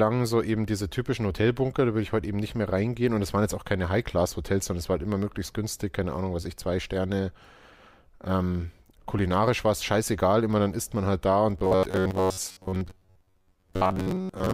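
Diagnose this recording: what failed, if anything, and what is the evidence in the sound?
From 11.59 s to the end, the speech becomes a rigid, metallic buzz near 94 Hz. It is robotic sound from repeated short buffers, likely a driver or buffer starvation. A chunk of about 11 ms repeats for most of the stretch, skipping real audio.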